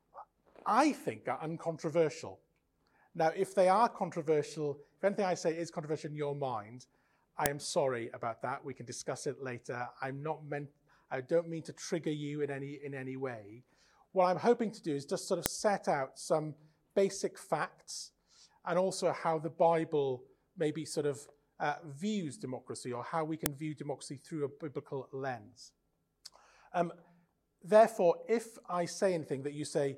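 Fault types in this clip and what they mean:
file header played as audio: sharp, loud clicks at 7.46, 15.46 and 23.46 s, exactly 8 s apart, snapping out regardless of the surrounding sound. Each marks a joined 8-second WAV piece whose header bytes were left in and played back as samples.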